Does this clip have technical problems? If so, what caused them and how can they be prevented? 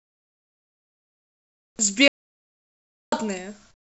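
Yes. From 0 to 1.79 s and again from 3.71 to 3.88 s, the room's background gives way to a steady, featureless hiss about 12 dB and then about 18 dB quieter. This is comfort noise in place of the background. The likely cause is discontinuous transmission: the sender stops sending during pauses, and the receiver synthesises noise shaped roughly like the background. Disabling DTX on the call, or recording before the call leg, prevents it.

From 2.08 to 3.12 s, speech cuts off into silence for about 1.04 s, with no room tone, then resumes mid-flow. This is an audio dropout to silence, likely from the input being lost while the recorder kept writing silence. Secure connections and monitoring the input level prevent it.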